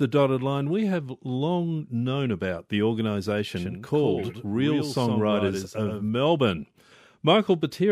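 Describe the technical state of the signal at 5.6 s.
At 5.6 s the signal is caught in a doubled audio track running from 3.56 to 6.09 s, likely because the speech is being picked up a second time through a slower path and mixed back in. The second copy trails by roughly a tenth of a second at about 5 dB below the original, with no decay or room colour. The speech sounds stuttered and slapped back, and the copy cuts in and out abruptly at the span's edges.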